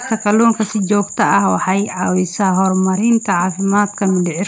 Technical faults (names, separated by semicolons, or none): echo leak